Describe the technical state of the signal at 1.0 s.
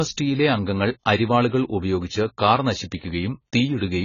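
At 1.0 s the speech sounds dull and smeared, with a warbling, fizzy edge on sibilants and nothing above 7 kHz. The cause is likely heavy AAC compression, present throughout the clip. At what sounds like a very low bitrate, around 16 kbps, the coder has dropped the top band and coarsely quantised the rest.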